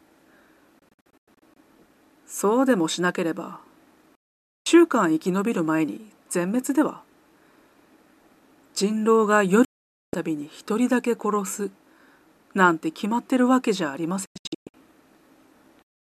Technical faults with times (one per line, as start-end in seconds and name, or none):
0.79-1.57 digital broadcast dropout
4.15-4.66 digital broadcast dropout
9.65-10.14 digital broadcast dropout
14.26-14.74 digital broadcast dropout